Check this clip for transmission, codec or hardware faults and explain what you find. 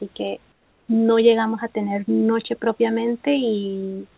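One fault shows up, in audio that has nothing above 4 kHz, as a narrowband call path would give. From 0.52 to 0.88 s there is comfort noise in place of the background. The sender likely stopped transmitting during the pause, and the receiver filled it with steady, featureless synthetic noise about 4 dB quieter than the real room noise.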